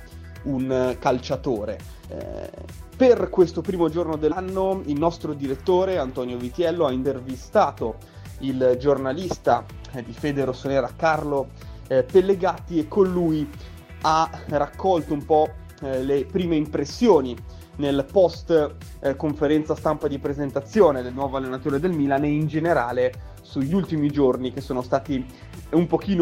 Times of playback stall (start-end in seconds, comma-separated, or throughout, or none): none